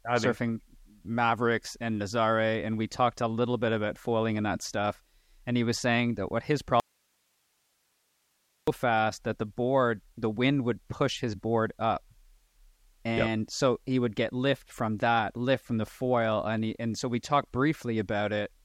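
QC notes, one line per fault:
6.80–8.68 s, audio dropout to a faint residue: The speech cuts out abruptly after "saying that what his" and returns just as suddenly at "fast that the board". The gap lasts 1.88 s. Only hiss remains, roughly 45 dB below the speech. The cut is sudden, not a pause or fade. The path after the break likely stayed live while the wanted signal was lost, leaving just its own noise floor.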